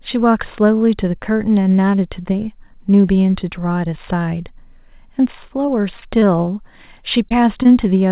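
From 5.66 to 6.49 s the speech goes choppy with repeated packet loss (robotic sound). Seven separate holes fall inside that stretch, the longest about 23 ms, and each one is bridged by extending the last stretch of waveform before the next arrives. Roughly a tenth of the span is synthetic fill, and because the gaps come in quick succession the voice turns choppy with small pieces dropped out.

Two short concealed packet losses follow, at 7.29 to 7.32 s and 7.63 to 7.67 s, each around 20 ms of missing audio. The receiver papers over each hole by carrying the preceding sound forward, from its pitch when voiced or as shaped noise otherwise, then crossfades back into the real signal. Each is heard as a brief smear or wobble against the band-limited call audio, which has nothing above 4 kHz and fits a G.711 A-law path.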